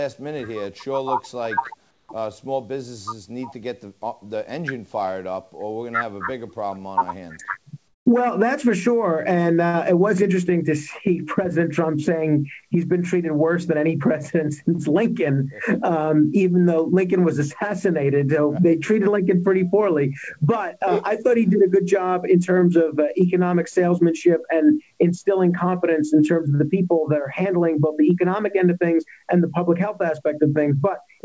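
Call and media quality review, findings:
Comfort noise in place of the background at 1.91–2.09 s and 7.88–8.06 s, 180 ms each. The real background drops out for a steady, featureless hiss, about 7 dB quieter the first time and about 12 dB the second. Likely discontinuous transmission at the sender, with the receiver generating noise during the pauses. On the spectrogram, the textured background gives way to a smooth, uniform band. On the waveform, the noise floor steps down, then back up. All content stops near 8 kHz, consistent with a wideband call codec.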